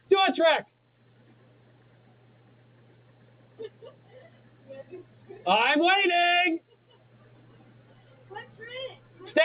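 Throughout, a noise suppressor applied to music or sounds treats held tones and tails as noise, pulling them down by around 20 dB. The waveform pumps, and sustained spectrogram lines break into flickering fragments.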